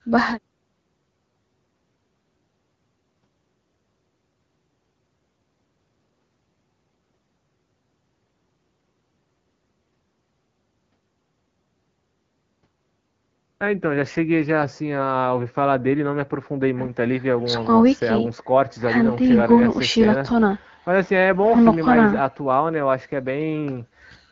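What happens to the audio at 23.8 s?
Nothing goes wrong at 23.8 s: the speech there runs through intact, carried as clear wideband HD Voice by the AMR-WB codec at 12.65 kbit/s, with no dropout, glitch or sudden change in the sound.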